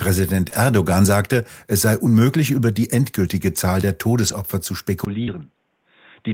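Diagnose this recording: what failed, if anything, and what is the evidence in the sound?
Network stage, short concealed packet loss: at 0.49–0.53 s and 5.23–5.29 s the audio smears briefly where the receiver extended the preceding sound to cover missing packets.

Network stage, lost packet rebuilt from error correction: at 0.53–0.55 s, just before "sagte es sei unmöglich", then 4.27–4.33 s and 5.27–5.33 s, the sound turns coarse and hissy for a few frames. Low-bitrate redundant copies were decoded instead of the originals. The spectrogram shows noisier texture.

Capture stage, input switched to a poorer device: from 5.05 s to the end, after a 20 ms silence, the sound goes dull and drops about 5 dB, with fresh background noise roughly 40 dB down. The spectrogram shows nothing above 3.8 kHz. The likely cause is a change to a narrowband headset profile or another microphone.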